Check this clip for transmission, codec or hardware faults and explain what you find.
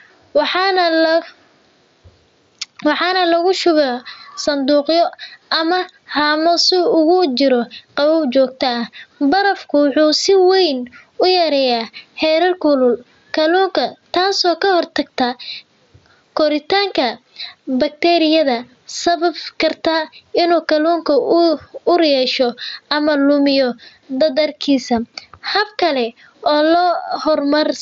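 One fault runs through the whole clip: gain pumping. The gain swings by around 10 dB, pulled down on each loud sound. The likely cause is a fast limiter fighting input gain set far too high. Nothing reaches above 7.7 kHz, which fits a Bluetooth mSBC headset link.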